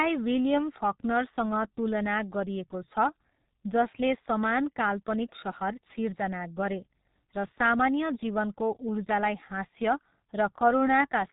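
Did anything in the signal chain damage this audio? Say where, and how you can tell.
Yes. G.723.1 codec damage runs through the whole speech clip at the codec stage. Nothing survives above 3.8 kHz, and heavy hoarse, muffled coding with smeared consonants points to roughly 6 kbit/s, where a slowly updated voice model cannot follow fast articulation.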